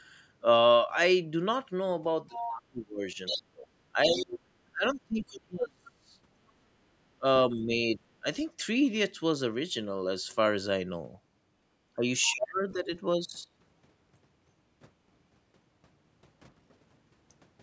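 From 2.29 to 6.15 s the speech keeps dipping and breaking up, with around three seconds of it pulled down, at worst by something like 30 dB. That's speech suppressed in double talk. Both ends were likely talking at once, and the echo canceller, unable to tell the local talker from the loudspeaker echo, ducked everything. Over the same stretch, from 2.32 to 4.26 s, there's a second voice sitting roughly 10 dB under the talker. That's the other side's voice leaking through, likely the far end coming out of the loudspeaker and not fully cancelled from the mic. Another tiny scrap of it appears at 5.85 to 5.91 s, much fainter, around 30 dB down.

Between 7.17 and 8.25 s the suppression returns, lighter this time. About half a second of speech drops, by roughly 20 dB, which again points to the canceller likely clamping down during overlap.

At 11.64 to 11.68 s the room sound briefly sinks by about 11 dB for roughly 40 ms, then comes back. 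That's background gated by the echo canceller: it likely saw loudspeaker activity and shut the mic down hard for a moment.

From 11.96 to 12.91 s there's another bout of speech suppressed in double talk. Roughly half a second is hit, with drops approaching 30 dB, likely from both sides overlapping again. Inside it, at 12.24 to 12.33 s, a short burst of the other side's voice leaks through, around 20 dB under the speech, likely more loudspeaker echo slipping past the canceller.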